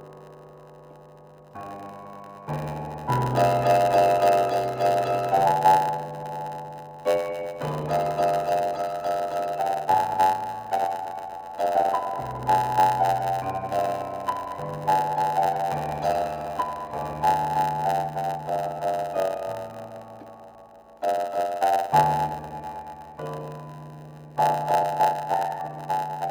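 From start to finish the audio carries a block size mismatch (padded). One stage hands over blocks shorter than the next stage reads, and the shortfall is filled with silence. The short gap that repeats in every block sets up a steady buzz at 91.9 Hz, and playback runs at 0.919 of its proper speed. Unlike a resampling error, the timbre holds. Unlike random dropouts, the gaps come at a rigidly even rate.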